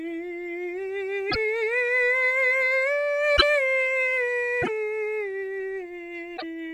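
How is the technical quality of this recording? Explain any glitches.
Four short glitches interrupt the music, each lasting about 70 ms, at 1.29, 3.36, 4.61 and 6.36 s. The likely cause is a broken MP3 bit reservoir. After frames were lost, the following 26.1 ms frames fetched borrowed bits from the wrong data, so the music jumps ahead and briefly decodes garbled content. On a spectrogram each event shows as a narrow vertical band breaking the harmonic pattern, and the waveform shows a sudden discontinuity.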